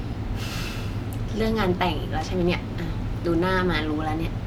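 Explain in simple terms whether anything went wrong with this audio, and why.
Nothing stood out as wrong when listening to this recording.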